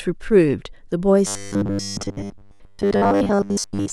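Robotic sound from repeated short buffers runs from 1.27 s to the end of this speech clip, likely from a roughly 10 ms chunk being replayed for most of the time, imposing a rigid 100 Hz metallic buzz.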